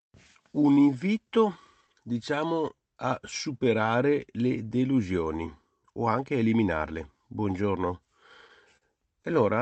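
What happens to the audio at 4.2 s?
At 4.2 s the speech sits inside a run of repeated timing corrections lasting from 0.10 to 8.05 s, where the receiver keeps inserting tiny repeated slivers so the audio plays at about 97% speed and gains roughly a third of a second overall. Each insertion is a faint hiccup or slight drag in tempo rather than a gap, which sets it apart from packet loss dropouts.

The cause is clock drift between sender and receiver. The sender's clock runs roughly 4% slow, so the jitter buffer keeps running short and must be padded. Every correction goes the same way, stretching and never cutting, and they arrive at irregular intervals, unlike the evenly spaced ticks of a fixed buffer fault.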